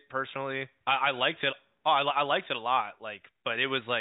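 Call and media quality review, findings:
No audible faults found.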